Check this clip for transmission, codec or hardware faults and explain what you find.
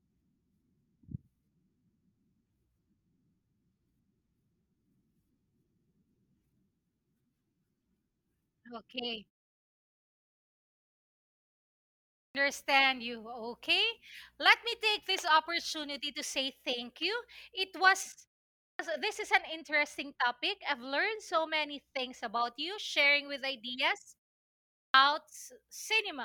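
Two faults are audible: clipped starts after pauses, and a stretch where de-emphasis was applied wrongly.

Clipped start after a pause occurs at 12.03 s, 18.5 s and 24.62 s, losing roughly 320 ms, 290 ms and 320 ms of speech respectively. The output device idles during the preceding pauses of 2.8 s, 0.3 s and 0.5 s and needs time to resume, so speech begins abruptly with its onset missing.

De-emphasis applied wrongly affects 18.03 s to 22.22 s. A treble-cut filter meant to reverse pre-emphasis acts on audio that never had it, or is applied twice, tilting the response downward to about 8 dB less at 10 kHz than at 1 kHz. That section sounds dull and muffled.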